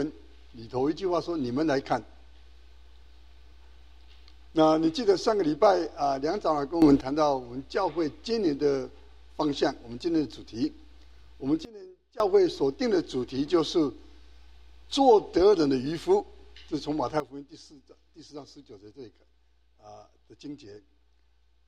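The audio jumps abruptly in level three times, with sound and background noise shifting together: up by about 11 dB at 6.82 s for 0.19 s, down by about 19 dB from 11.65 to 12.2 s, then down by about 13 dB from 17.2 s to the end. These are likely sudden gain jumps, where digital gain changes instantly between samples without a ramp.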